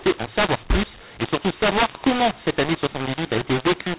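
From start to finish, the speech carries a mu-law and A-law mix-up: samples coded as A-law are decoded as mu-law, so levels are scrambled, pauses fill with hiss, and the waveform looks jagged and never settles to silence, while the spectrogram shows broadband noise up to the 4 kHz telephone ceiling.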